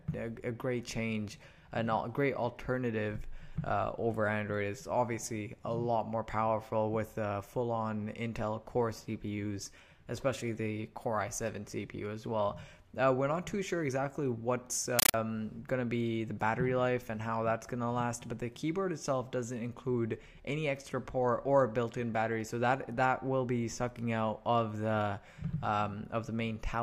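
From 14.99 to 15.14 s, a compressed stream is played as audio: coded data, which fits an AC-3 bitstream, reaches the output undecoded. Each 9.3 ms noise burst and its silent padding repeat 31.25 times a second. This regular chattering static sets it apart from random digital noise.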